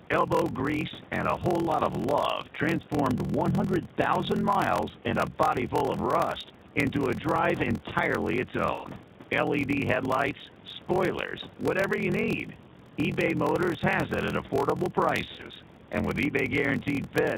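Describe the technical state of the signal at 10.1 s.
At 10.1 s the speech carries two faults, both present for the whole clip rather than only at this moment.

The first is a block size mismatch (padded). One stage delivers shorter blocks than the next stage reads, and the shortfall in each block is filled with silence. The buzz repeats at 43.1 Hz, which fits a 1024-sample read block at 44.1 kHz. The speed factor of 0.861 suggests that only about 882 samples of real audio arrive per block, leaving roughly 3 ms of zeros each time. The result is a steady 43.1 Hz buzz riding on the voice, and the speech plays about 14% slow while keeping close to its natural pitch. On a waveform this shows as regular flat dropouts every 23 ms or so. A spectrogram shows thin vertical gaps at that spacing, with harmonics at multiples of 43.1 Hz.

The second is the G.729 codec, here the G.729A variant at 8 kbit/s. 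This codec rebuilds speech from a vocal tract filter, a pitch predictor and a sparse set of pulses in each 10 ms frame. The damage is plainly audible: the voice sounds rough and somewhat synthetic, and the faint room noise, about 22 dB below the speech, warbles instead of hissing smoothly. A spectrogram shows a hard ceiling at 4 kHz with nothing above it. Below that cutoff the harmonics look smeared and patchy frame to frame.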